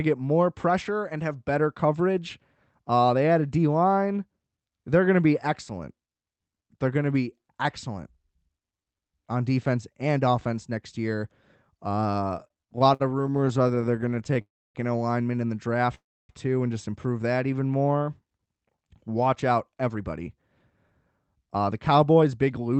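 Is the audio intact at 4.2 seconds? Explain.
Yes, the audio at 4.2 seconds is intact, with no fault at that moment, only the band-limited, coded character of the call path, which tops out around 8 kHz.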